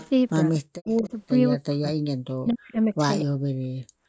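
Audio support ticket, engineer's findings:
Echo leak. Delayed copy of the speech, trailing the original by 237 ms. Heard at 0.00–0.09 s, 0.86–1.11 s, 2.48–2.54 s and 3.20–3.25 s. It sits about 20, 30, 25 and 10 dB below the speech. Likely cause: the far end is on a loudspeaker, and its echo canceller let some of the speaker output through its microphone and back down the line.

Speech suppressed in double talk. Speech level collapses in chunks while both sides talk. Heard at 0.58–1.13 s (about 0.3 s affected), 1.59–2.74 s (about 1 s), 2.91–3.00 s and 3.20–4.02 s (about 0.7 s). Deepest drops are around 40 dB, and a mild 10 dB dip at 2.91 s. Likely cause: the echo canceller mistook the talker for loudspeaker echo and attenuated both.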